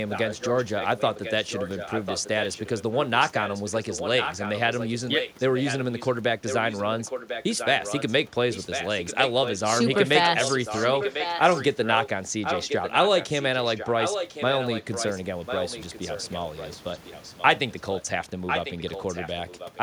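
Echo leak runs through the speech at 0.09–2.83, 3.2–6.15, 6.46–8.12, 8.52–9.6, 9.91–12.09, 12.42–18.02 and 18.46–19.8 s. A copy trails by 1.05 s at about 10 dB down, rising to about 5 dB down from 8.52 to 18.02 s. This is likely loudspeaker pickup the far-end echo canceller missed.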